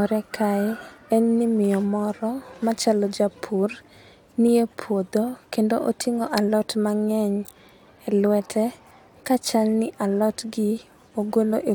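No technical faults are audible anywhere in it.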